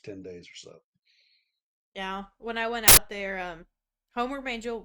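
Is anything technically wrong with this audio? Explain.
Yes. At 2.88 to 2.97 s, between "when I went" and "there um", there is an uninitialised buffer fault. A block played before audio was written to it, so leftover memory became samples. It sounds like a sudden loud burst of digital noise lasting about 93 ms, which fits a 4096-sample block.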